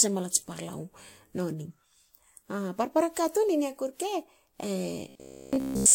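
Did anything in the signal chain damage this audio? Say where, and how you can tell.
Yes. Codec stage: throughout, the band stops at the lowest cut-off in the chain, with layered, mismatched compression smearing. This is likely transcoding between lossy codecs, probably a WMA encode re-encoded to Vorbis.

Driver or buffer stage: from 5.09 to 5.95 s the speech becomes a rigid metallic buzz at 66.7 Hz, likely robotic sound from repeated 15 ms buffers replacing essentially all real audio.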